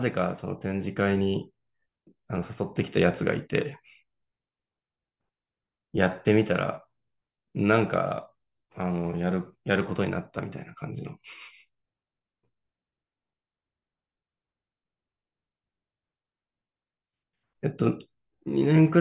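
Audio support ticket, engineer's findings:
No faults found on listening.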